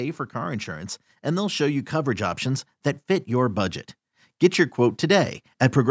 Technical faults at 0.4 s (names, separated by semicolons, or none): automatic gain rising